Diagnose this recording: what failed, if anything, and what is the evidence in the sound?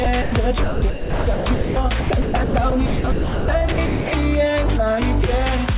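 Sound chopped by the voice detector, at the call-processing stage: from 0.04 to 0.32 s about 120 ms gives way to hiss-like comfort noise, and from 0.64 to 4.12 s about 2.08 s is filled the same way. The likely cause is the sender's detector gating the audio off repeatedly. The band stops at 4 kHz, which fits a G.711 call path.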